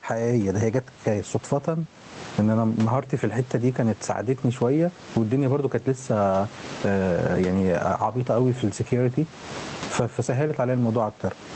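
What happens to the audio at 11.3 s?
At 11.3 s the gain pumping that runs through the whole clip is still present. Loud and soft parts are pulled closer in level and the sound is squashed, with a gain swing of around 20 dB, likely from excessive input gain driving a fast limiter or compressor.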